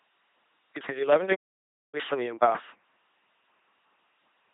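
From the first moment, the speech carries the sound of an LPC-10 vocoder. The voice is buzzing and mechanical, like a robot. Each instant is rebuilt from a short vocal tract filter driven by either a pulse train or noise, never a mix. The damage is heavy. Where the voiced or unvoiced choice goes wrong, buzz and hiss replace natural sounds. The buzzing, mechanical quality fits a 2.4 kbit/s vocoder.

At 1.35 s the sound stops mid-flow. Silence lasts about 572 ms, until 1.95 s. Then the audio resumes. This is a playback stall. The likely cause is the player running short of data, or its thread being blocked, so the output fell silent until it recovered. The gap is long enough to be noticeable.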